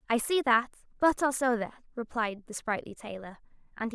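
No technical fault can be heard anywhere in the recording, and the signal stays steady and continuous throughout.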